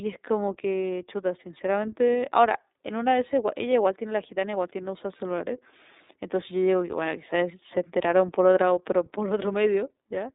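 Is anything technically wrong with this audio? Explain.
Yes. Throughout the speech the sound is thin and boxed-in, with a faintly rough, synthetic edge. This is iLBC codec damage, and it is plainly audible. Nothing comes through below about 300 Hz or above 3.7 kHz, which is telephone narrowband. The codec rebuilds the excitation of each 30 ms frame on its own, without drawing on the previous frame, and at this low rate fine detail is lost. The graininess fits the 13.33 kbps iLBC mode.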